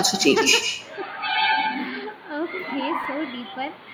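From the first moment to the end, the speech carries an echo with no canceller. A second copy follows each phrase about 150 ms later, roughly 7 dB quieter. It sounds thinner than the direct sound. The far end is playing the call through a loudspeaker. Its microphone catches that playback and sends it back unremoved. The result is a constant shadow trailing the talker.

At 0.8 s the input switched to a poorer device, likely another microphone or a headset's call profile. There is no gap at the change. The tone turns dull and boxy at once. A narrower band gets through from there to the end. The level shifts by a few decibels. A faint new noise floor appears, far below the speech. The narrowed band holds until the clip stops.

Between 3.01 and 3.05 s, chunks play out of order. A short block of audio came late and sits after material that should follow it. The pattern fits blocks of about 10.67 ms, with one displaced by about three blocks. 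Nothing is missing. The order is wrong, though, and there are hard joins. That brief stretch sounds jumbled and garbled.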